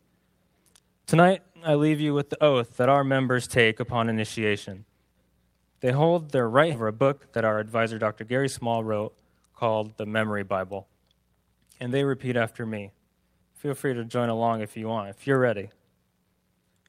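The audio has a skip ahead at 6.73 s: roughly 0.4 s is missing and both sides join directly, with no silence or concealment filling the gap, unlike a dropout. A jitter buffer speed-up follows from 6.85 to 8.71 s, running at 108% speed with unchanged pitch as short pitch-period pieces are cut, trimming roughly 150 ms of buffered delay.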